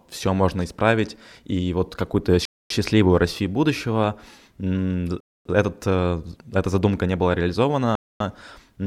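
At 2.45, 5.20 and 7.95 s, a gap between chunks inserts 250 ms of hard-edged silence at each 2.5 s join, seen as blank bands.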